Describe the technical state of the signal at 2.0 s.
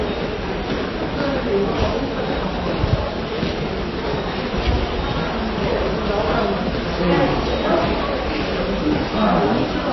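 At 2.0 s, as throughout, the audio carries likely MP3 compression damage: nothing above 5.8 kHz, and weak components flicker between frames, giving a watery swirl that a plain low-pass filter would not produce.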